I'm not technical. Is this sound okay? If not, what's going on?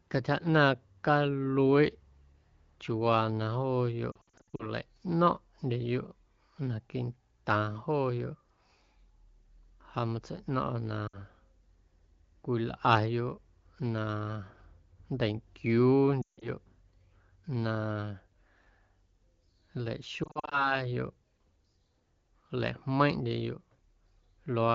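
No. Lost AMR speech frames at 4.1–4.7, 11.07–11.18, 16.2–16.5 and 20.2–20.8 seconds: radio errors corrupted bits of the call, so the phone patched the gaps by repeating and fading the last good sound, causing brief warbles and dropouts.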